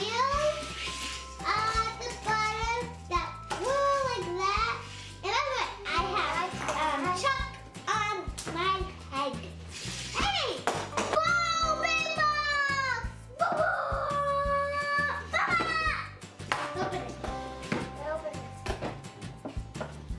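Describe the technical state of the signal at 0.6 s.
At 0.6 s the signal is intact, with no dropout, distortion, glitch or other fault audible at that moment.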